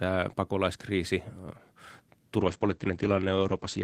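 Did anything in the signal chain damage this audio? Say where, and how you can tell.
Yes, a call bitrate drop in the codec stage: from 2.38 s the speech goes rough and muffled as the bitrate falls from 32 to 12 kbps, cutting bandwidth from 20 kHz to 8 kHz.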